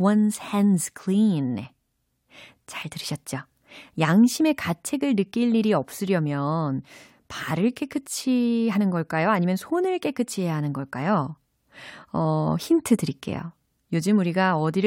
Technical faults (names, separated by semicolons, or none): none